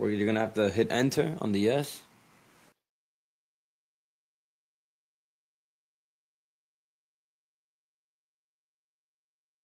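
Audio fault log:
No audible faults detected.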